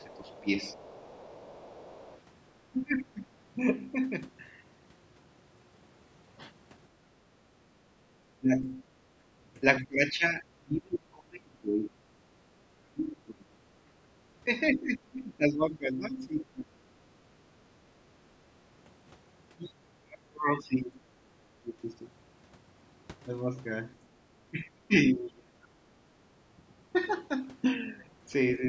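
Other side's voice leaking through, from 0.0 to 2.2 s: a faint second voice, around 25 dB below the talker, sits under the opening. It is likely loudspeaker playback that the echo canceller failed to strip from the microphone. Speech suppressed in double talk covers 0.0 to 3.3 s. For about a second in total the talker's voice sinks by up to roughly 20 dB, likely because the canceller could not tell the talker from the echo and turned both down.

Background gated by the echo canceller at 7.46 to 7.58 s: the room sound dips by about 9 dB for a brief moment, then returns. The canceller has clamped the microphone hard while the loudspeaker plays.

Speech suppressed in double talk returns from 8.23 s to the end of the clip. Across about seven seconds the voice drops by as much as roughly 25 dB, likely because both sides were talking at once.

Background gated by the echo canceller again at 12.46 to 12.53 s: a short dip of about 10 dB in the room sound.

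Other side's voice leaking through at 14.72 to 14.8 s: a brief scrap of a second voice, roughly 20 dB below the talker, likely echo that was not cancelled.

Background gated by the echo canceller at 17.68 to 17.8 s: the room sound drops by about 8 dB and recovers. The call's microphone processing is also audible, since nothing above 8 kHz comes through.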